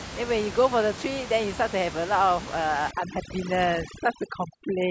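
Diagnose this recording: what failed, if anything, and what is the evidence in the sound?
Overdone noise removal in call processing: from 2.91 s to the end, bands near the room noise are gated out, leaving twinkling specks.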